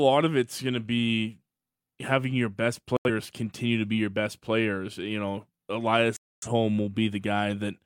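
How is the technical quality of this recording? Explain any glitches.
The speech is marred by two digital broadcast dropouts. From 2.97 to 3.09 s, between "be having your best" and "continue to be your", the sound mutes abruptly. The receiver lost valid frames and silenced output until good ones returned. The hole fits roughly two lost frames. From 6.17 to 6.48 s a longer mute follows, suggesting around six. Unlike packet-loss concealment, nothing is smeared or synthesised across the gaps. The speech simply stops and resumes further on, so what fell inside is gone rather than delayed.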